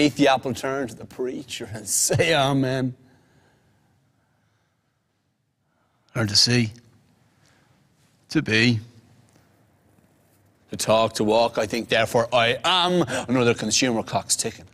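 Nothing in the audio stood out as a technical problem on listening.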